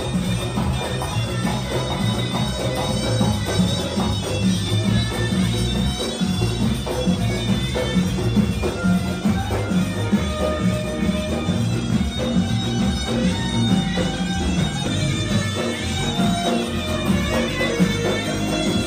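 Brief glitches at 3.58 s, from 14.86 to 14.88 s, and from 17.46 to 17.48 s come from damaged data in a compressed stream. Corrupted bytes make the decoder misread a frame, lose sync and hunt for the next valid header, so each event is a short glitch about 20 ms long. A plain dropout would fall silent, and a click would be a single broadband tick.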